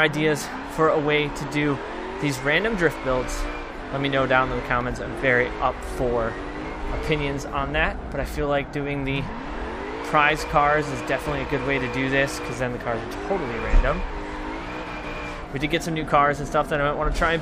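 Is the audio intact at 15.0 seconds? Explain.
Yes, the audio is intact at 15.0 seconds, with no dropout, glitch or other fault audible at that point.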